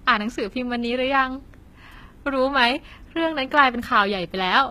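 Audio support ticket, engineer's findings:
Likely HE-AAC compression, throughout: upper band replicated from lower bands, not coded; s sounds gritty and metallic, nothing above 14.9 kHz, pointing to a bitrate near 20 kbps.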